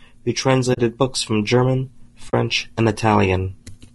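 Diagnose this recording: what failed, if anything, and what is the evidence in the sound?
The codec stage is at fault throughout this speech. The voice sounds rough and grainy for the whole clip. Noise fills the gaps between pitch harmonics, and the top band sounds dull and somewhat synthetic. The damage is plainly audible. This is likely low-delay AAC compression, the AAC-ELD kind used in video calls. Its short frames resolve harmonics poorly and spend bits fast. The texture fits a low rate near 32 kbps.

AAC frame loss with muting sits at the network or decoder stage. There are two short dropouts, at 0.73 to 0.78 s and at 2.29 to 2.34 s. Each gap lasts about 40 ms, which fits two lost frames. The decoder zeroed the missing spectrum. Overlapping windows fade the sound out and back in. The result is a soft-edged hole.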